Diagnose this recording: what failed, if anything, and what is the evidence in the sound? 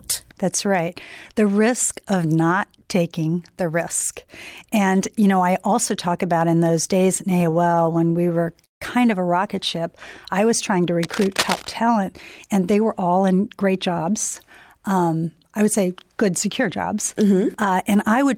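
At the network stage, repeated stalls (stutter) run from 7.31 to 8.83 s. The jitter buffer ran dry 24 times. The receiver stretched the last sound across about 0.4 s in total, the longest single gap being 157 ms, so about 27% of that span is concealed. Nothing is lost, but the speech drags and stutters. A spectrogram shows the same frame repeated as smeared horizontal bands.

Cable scratch noise sits from 11.03 to 11.69 s in the analogue wiring. It is dense, uneven rustling at about 5 dB below the speech. The likely cause is a worn cable or connector being moved, rapidly changing contact resistance. On a spectrogram it appears as ragged broadband vertical streaks, and the waveform shows spiky, irregular bursts.

In the buffer, a jitter buffer speed-up between 13.09 and 13.58 s plays the speech at 106% speed with unchanged pitch. The receiver cut short pitch-period pieces, removing roughly 40 ms, to shed excess delay. 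In the waveform, the cycles are spliced tighter together. A spectrogram keeps the same harmonic spacing while the syllables shorten.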